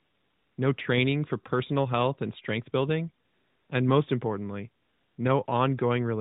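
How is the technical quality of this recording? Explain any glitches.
The recording carries the narrow, sub-4 kHz sound of an AMR narrowband phone call, which fits the 12.2 kbps mode, and its pauses are filled with AMR comfort noise.

AMR comfort noise appears at 0.00–0.58 s before "no training for personal", at 3.26–3.70 s between "health and strength building" and "and most importantly", at 4.84–5.18 s after "building and most importantly", and briefly at 5.46–5.48 s. In each gap the phone stopped sending speech, and the receiver generated smooth, steady synthetic noise that switches in and out in place of the real background.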